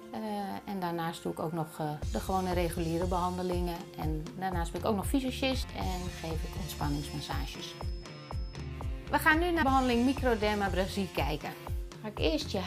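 At 5.62 to 5.64 s, and again at 9.62 to 9.64 s, compressed frames are skipped. The audio jumps ahead about 200 ms, then about 150 ms, which fits roughly ten and seven lost 23.2 ms frames. Overlapping frames smear each join into a short blip rather than a click.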